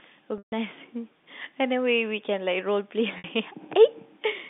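At 0.38 s the speech hits packet loss with pitch repetition. About 140 ms of audio goes missing, which fits seven 20 ms packets, until 0.52 s. The receiver loops the last pitch period, so a buzzy held tone fades to silence over roughly 50 ms before the speech cross-fades back. A shorter 60 ms loss at 3.18 to 3.24 s is just a brief, slightly buzzy hold. Plain dropouts would cut to silence or clicks instead of a sustained pitch. All of this sits within the narrow telephone band of the G.711 line.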